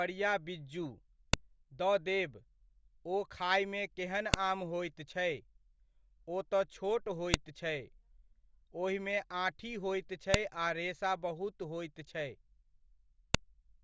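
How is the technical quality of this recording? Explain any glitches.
The recording has one recurring fault: a file header played as audio. Sharp, loud clicks land at 1.34, 4.34, 7.34, 10.34 and 13.34 s, exactly 3 s apart. Each one marks a joined piece whose header bytes were decoded as samples. The strict 3 s spacing, and snaps that ignore whatever the speech is doing, separate this from random dropouts or mouth clicks.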